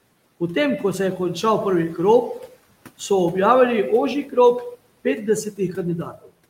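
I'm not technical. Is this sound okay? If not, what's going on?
No. Right at the end of the clip, from about 6.12 to 6.29 seconds, a brief stretch of the speech suddenly goes faint and sounds swallowed. This is speech cut by the noise suppressor. That feature tries to turn down background sound, and here it briefly mistook a quiet bit of speech for noise and lowered it along with the room's background noise.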